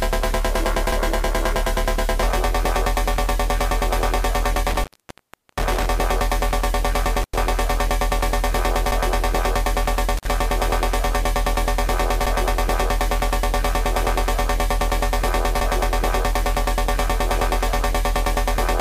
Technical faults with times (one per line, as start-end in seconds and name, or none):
4.56-5.86 intermittent contact
7.21-7.36 intermittent contact
10.17-10.27 intermittent contact